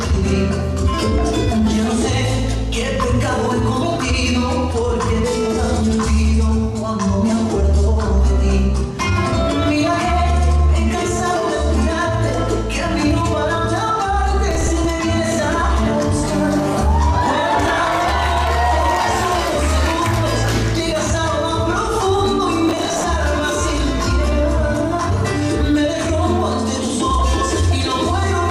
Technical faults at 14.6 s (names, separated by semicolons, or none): processor overload crackle